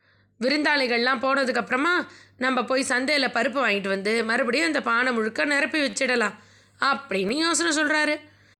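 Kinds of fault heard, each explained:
Repeated buffer: at 5.9 to 5.93 s and again at 7.29 s, fresh audio failed to reach the output in time, so the playback device replayed the piece it already held. The first event repeats a tiny slice three extra times over about 30 ms and comes across as a short buzzy stutter. The second repeats it once and sounds like a click. Repeats this small fit a 10 ms buffer, and little if any of the speech is lost.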